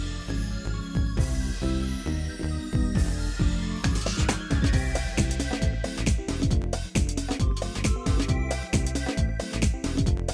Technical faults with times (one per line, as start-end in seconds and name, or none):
none